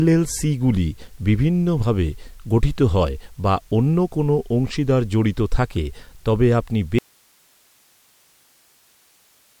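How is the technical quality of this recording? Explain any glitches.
The recording has one clear fault: an audio dropout to a faint residue from 6.99 s to the end of the speech. Right after "থাকে তবে আপনি" the signal cuts out abruptly, not fading the way a pause would, leaving only hiss roughly 40 dB below the speech level. The cause is likely a break in the feed while the downstream path stayed live, so the capture kept recording its own noise floor instead of silence.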